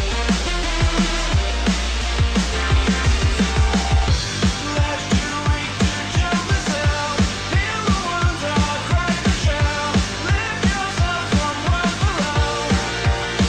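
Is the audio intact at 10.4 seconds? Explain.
Yes, the audio is intact at 10.4 seconds, with no dropout, click, distortion or other fault at that moment.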